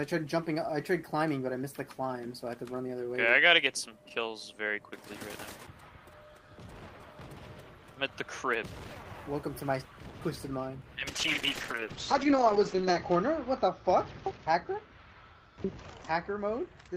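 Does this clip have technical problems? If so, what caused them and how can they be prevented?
Yes. A call bitrate drop begins at 11.09 s and runs to the end: the encoder falls from 32 to 8 kbps, bandwidth narrows from 20 kHz to 8 kHz, and the sound turns muffled and rough, unlike packet loss, which brings gaps rather than steady dulling. Securing stable network capacity prevents it.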